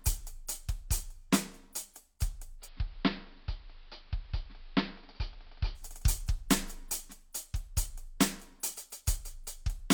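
At 2.58 s the music goes through a digital radio blending to analogue. The receiver lost its digital stream and cross-faded over about 112 ms to the station's AM broadcast. The treble is cut back, the level dips by about 1 dB, and a steady hiss sits far below the music. At 5.86 s it blends back and the full treble returns. The hiss and the quick cross-fades at both ends mark this as a reception switch rather than a plain filter or codec bandwidth drop.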